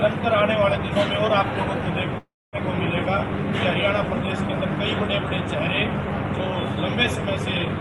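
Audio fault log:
2.18–2.56 s, call audio freeze: packets were likely held up in transit and the jitter buffer ran dry, so the receiver stretched the last sound into a fading buzz that sinks into 240 ms of silence. Playback then resumes where it stopped, adding 349 ms of delay with nothing lost.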